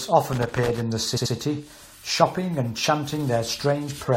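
From 0.33 to 0.81 s there is loose connector crackle. A worn or dirty contact in the signal chain kept making and breaking as it shifted, chopping the speech and adding pops wherever the line carried DC. It comes through as an irregular burst of scratchy crackle lasting about half a second. That randomness sets it apart from digital clicks, which land as isolated, cleaner ticks rather than a rough, uneven cluster.

At 1.16 s the repeated frames fault begins and runs to 1.33 s. An 85.3 ms stretch of the encoded stream plays twice more in quick succession, which fits a block of four compressed frames being written or sent more than once. The result is a mechanical stutter, and the clip runs 170.7 ms longer than it should. Unlike an echo, each repeat is an identical copy at full level rather than a decaying reflection.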